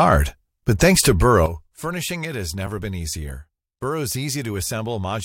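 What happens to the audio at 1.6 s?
At 1.46 s, just after "but thanks to", a sudden gain jump drops speech and background noise together by about 11 dB until the end, likely an unramped gain change.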